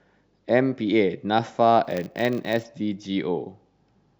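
A filter restarted on every block runs from 1.84 to 2.64 s of this speech. Across that stretch a filter in the chain drops its internal state at each block boundary and begins again from silence, so every block opens with a small transient. Those repeated onsets form a buzz at 100 Hz, which fits blocks about 10 ms long, and the buzz rises and falls with the level of the speech.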